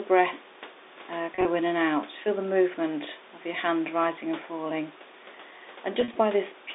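Two brief buzzy holds interrupt the speech. At 1.35 to 1.45 s, just after "breath uh" and before "in and out", the sound briefly sticks on a slightly droning, held tone; at 6.01 to 6.15 s it happens again. This is packet loss with pitch repetition: about 60 ms went missing in each spot, in runs of at most 30 to 40 ms, and the receiver filled each gap by looping the last pitch period.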